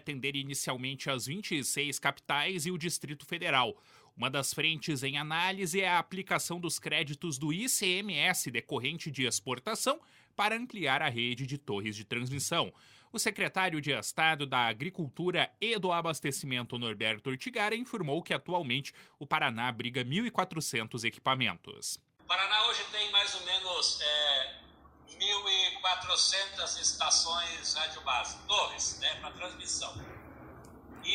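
From 15.62 to 19.57 s, a call bitrate drop: coarser encoding sounds watery and muffled, fitting a fall from about 96 to 24 kbps, and the spectrogram's high band empties.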